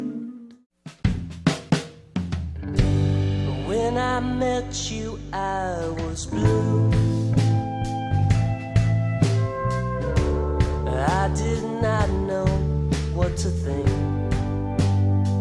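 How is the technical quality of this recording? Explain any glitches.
No technical faults or glitches can be heard here.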